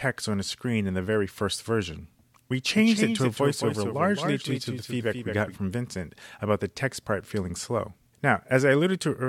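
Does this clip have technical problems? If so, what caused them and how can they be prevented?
Yes. A doubled audio track runs from 2.77 s to 5.55 s: a second, full-band copy of the speech trails the original by roughly a fifth of a second, around 5 dB quieter, with no reverberant tail or room colouring. It switches on and off abruptly at those points. The likely cause is the same signal reaching the mix twice, through a slower parallel capture path or a misaligned duplicate in an edit. To prevent it, route each source through only one path and check edits for overlapping copies.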